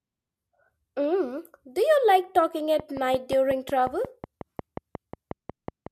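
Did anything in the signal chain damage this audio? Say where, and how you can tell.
Yes. Right after "you like talking", from 2.80 s to 5.88 s, there's a train of clicks: about twenty near-identical ticks at a steady 5.5 per second, peaking about 10 dB above the speech and audible in the gaps too. That points to likely interference in the analogue wiring.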